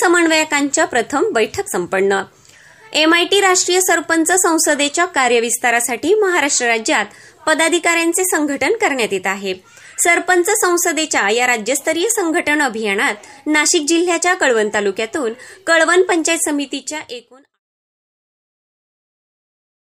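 No faults are audible; the level eases down smoothly from around 16 s to silence by 17.6 s with no click or hard edge, as an editor would finish it.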